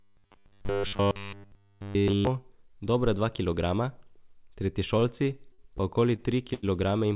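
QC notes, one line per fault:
0.01–2.27 s, robotic sound from repeated short buffers: a rigid metallic 100 Hz buzz over the speech, likely from one 10 ms buffer replayed while new audio was skipped.
5.00–5.04 s, short stall from a late packet: one sound is held slightly too long, about 18 ms stretched while the jitter buffer waited, with nothing lost.
5.52–6.65 s, repeated stalls (stutter): four stretched holds, 174 ms in total and the longest 86 ms, make the speech drag as the jitter buffer repeatedly ran empty.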